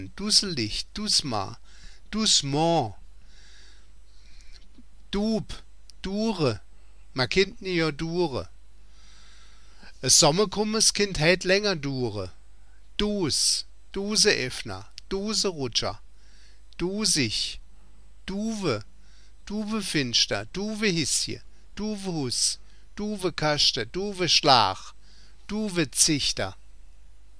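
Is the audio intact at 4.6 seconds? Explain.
Yes, the audio is intact at 4.6 seconds, with no dropout, click, distortion or other fault at that moment.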